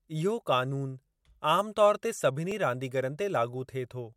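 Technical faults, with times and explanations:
2.52 s, dropped buffer (overrun): an abrupt jump in the speech, with no gap of silence around it. The waveform skips forward by a few milliseconds and the two sides meet directly. The likely cause is that the input samples were not collected before the hardware wrote over them, which discarded about 4 ms of audio and spliced the remaining stream straight together.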